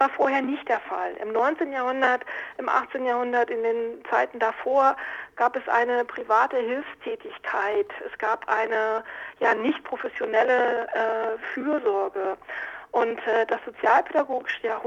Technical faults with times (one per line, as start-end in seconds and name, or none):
none